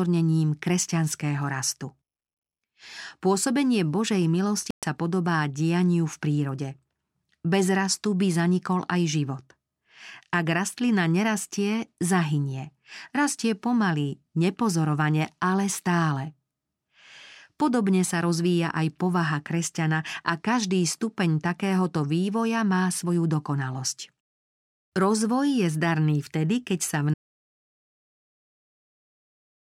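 Bluetooth dropout at 4.71 to 4.83 s punches a hole of about 120 ms into this speech recording: the sound stops, the output sits silent, and the speech resumes as though it had carried on underneath. That pattern likely comes from audio packets failing to reach the headphones in time and being discarded. A gap that length fits a handful of lost packets rather than one, and nothing is replayed or smeared across it. Audio dropout to silence begins at 27.14 s and runs to the end of the clip. The speech cuts off mid-flow and is replaced by silence, with no room tone or noise floor beneath it, so whatever followed is simply missing. Because the gap is completely empty rather than quiet, the input was likely lost while the recorder kept writing blank samples, through a disconnected device, a failed link or an accidental mute.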